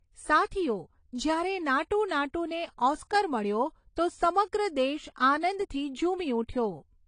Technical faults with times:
0.00-7.07 low-bitrate audio saved at a high bitrate

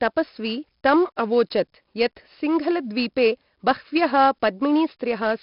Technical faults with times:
0.00-5.43 4-bit ADPCM compression

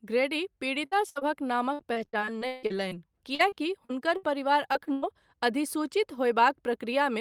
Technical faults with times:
0.75-5.32 repeated packet loss (robotic sound)

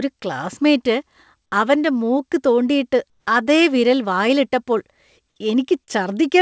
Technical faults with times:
3.10-3.26 comfort noise in place of the background

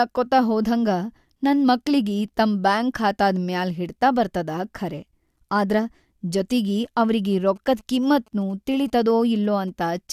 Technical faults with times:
6.85-9.70 GSM signalling bursts

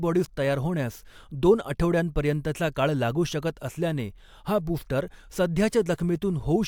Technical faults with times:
none

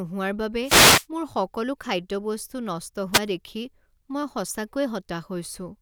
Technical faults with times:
0.63-1.06 wireless microphone noise hit
3.12-3.20 wireless microphone noise hit

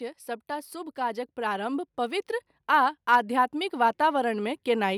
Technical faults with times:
0.47-4.93 automatic gain rising

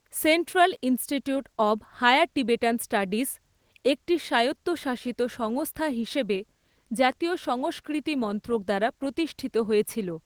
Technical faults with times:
none

